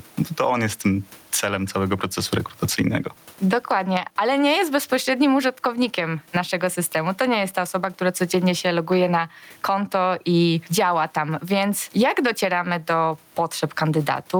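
Throughout the speech, gain pumping makes the background swell in every pause and duck under each loud syllable, a swing of roughly 15 dB. The likely cause is input gain set far too high with a fast limiter clamping it. On a waveform the peaks sit squashed near one level, and a spectrogram shows the room noise, about 41 dB below the speech, brightening between phrases and darkening beneath them.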